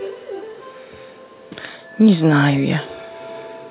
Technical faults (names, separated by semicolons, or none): echo leak